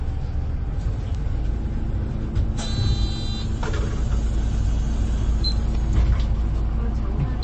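MP3 compression runs throughout the clip, from start to end. Nothing remains above 8.4 kHz, which fits a low bitrate of around 32 kbps. At that rate there are too few bits to code every frequency line, so weak lines are dropped and return from frame to frame. The resulting codec damage is plainly audible as a watery, swirling texture over the sounds, together with the dull, cut-off treble. Heavy lossy encoding is the likely cause.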